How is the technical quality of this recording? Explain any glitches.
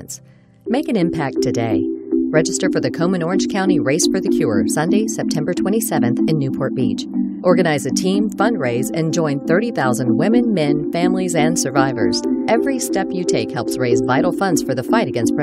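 One glitch stands out near the end. From 12.1 s to 14.0 s there is a Bluetooth SBC bit pool drop. The wireless link got congested, and the sender cut the bits spent on each audio frame to keep playback going. The top sub-bands lose most or all of their share. The remaining bands are quantised coarsely. The treble goes dull and a gritty grain appears. The sound points to a bit pool falling from about 31 to about 15, near 105 kbps.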